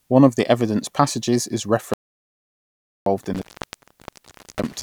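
An audio dropout to silence runs from 1.94 s to 3.06 s, taking out about 1.13 s of the speech. The signal stops abruptly mid-flow and is replaced by silence, with no room tone or hiss underneath, before resuming just as suddenly. That dead-flat gap suggests the input was cut off upstream, likely a disconnected or muted source, while recording carried on writing silence. Whatever was said during that stretch is lost.

An intermittent contact fault begins at 3.18 s and continues to the end of the clip. A loose plug or cable breaks the connection, leaving the line open for about 1.18 s in total across this section. The speech cuts in and out with crackles at each break, and while the contact is open faint hiss remains, not the complete silence of the earlier dropout.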